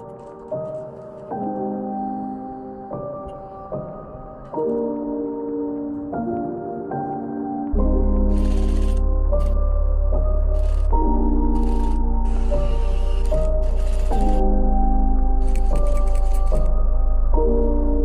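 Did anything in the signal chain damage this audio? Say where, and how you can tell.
No, nothing in the chain audibly damaged this audio.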